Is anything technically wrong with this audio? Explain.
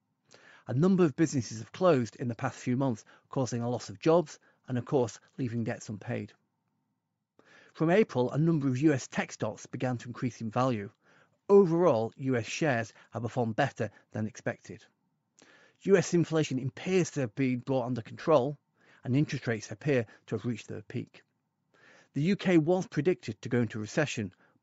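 Yes. Throughout, the speech has a breathy, grainy upper edge, likely from Bluetooth LC3 compression. At a low bitrate, near 32 kbps, the codec discards upper spectrum and fills it with noise.

Lost LE Audio frames occur at 4.66 s, after "a loss of jobs", and at 18.22 to 18.26 s, after "have been brought under". The decoder reuses the last spectrum with scrambled signs, so each gap turns into a brief noisy smear. The first gap lasts about 20 ms, which fits two lost 10 ms frames. The second lasts about 40 ms, which fits four.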